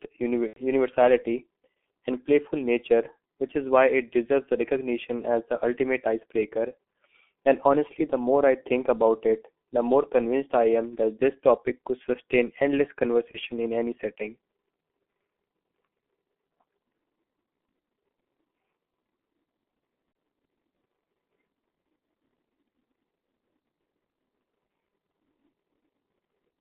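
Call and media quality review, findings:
G.723.1 codec, whole call: muffled, hoarse speech confined to roughly 250 Hz to 3.4 kHz, consonants smeared. Heavy damage at a rate fitting about 6.3 kbit/s. Unlike a plain narrowband line, the slowly updated voice model roughens and blurs articulation.

VoIP packet loss concealed by the speech codec, 0.47 to 0.61 s, 13.32 to 13.38 s, 20.12 to 20.15 s: stretched sound fading down, weak recovery afterward. First gap fits three lost 30 ms frames. Distinct from dropouts: filled, though the first gap's third frame is muted.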